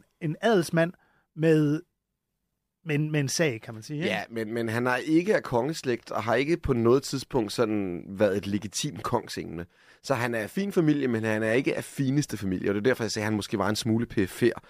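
No technical faults can be heard anywhere in the recording.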